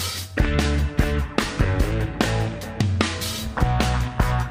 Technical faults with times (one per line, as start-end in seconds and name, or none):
none